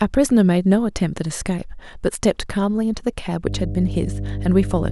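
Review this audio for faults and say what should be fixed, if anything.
From 3.46 s to the end, a ground loop or transformer injects the 50 Hz supply as mains hum, a steady low tone nearly as loud as the speech. Prevent it by powering all equipment from one earthed outlet, using balanced cables, and routing audio lines away from transformers and power cables.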